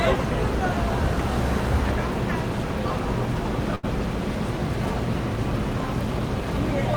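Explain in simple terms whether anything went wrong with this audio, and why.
At 3.75 s the sound briefly smears into a held, fading sound for about 76 ms, then jumps ahead at 3.85 s with roughly 80 ms missing. This is a burst of packet loss: several pieces of audio never arrived, so the player stretched the last sound and then skipped forward.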